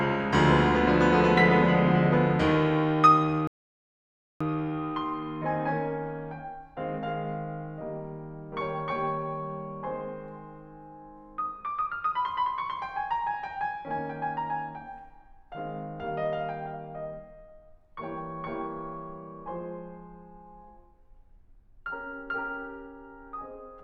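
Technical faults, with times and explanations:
3.47–4.41 s, rebuffering stall: the music drops to silence for about 0.93 s, then picks up exactly where it stopped, with nothing skipped. The player used up its downloaded audio and had to wait for more data, so the pause adds time without removing any music.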